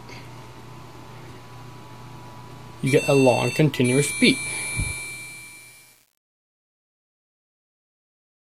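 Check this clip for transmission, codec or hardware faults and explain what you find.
One fault is present: truncation distortion on a fade, running from 4.92 s to the end at 8.57 s. The fade-out that begins around 5 s is processed with too few bits and no dither, which fits an 8-bit stage. As the level drops toward the smallest step, the waveform collapses into coarse square stairs, so the tail turns gritty. A waveform view shows blocky steps, and a spectrogram shows harsh broadband hash.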